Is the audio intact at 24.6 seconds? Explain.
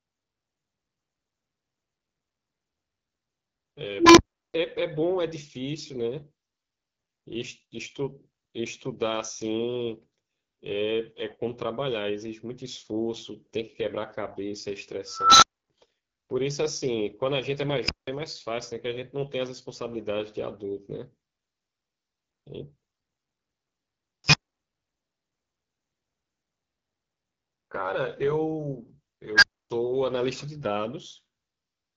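No. From 24.24 to 24.61 s an unstable filter takes over: a tone of roughly 5 kHz swells in about 91 ms and clips, then the audio cuts out for about 279 ms while the runaway filter resets. That self-generated squeal before a dropout is what separates it from ordinary feedback or a clean dropout.

The AMR wideband (HD Voice) codec damage also persists through this moment. The speech is plainly rough and raspy, which fits one of the lowest AMR-WB modes, near 8.85 kbit/s, and nothing is present above 7.6 kHz. Unlike a plain low-pass, the 6.4 to 7 kHz band is hissy synthetic noise rather than real detail.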